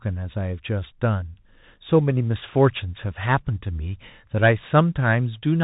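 From start to finish the speech passes through a Bluetooth CVSD headset codec, and the damage is plainly audible. Nothing above 3.8 kHz survives, so the sound is narrow and boxy, consistent with a 64 kbps CVSD link. The codec encodes each sample as a single up-or-down bit with an adapting step size. Loud high-frequency energy outruns that step and distorts, s sounds come out scratchy, and a granular hiss sits under the speech.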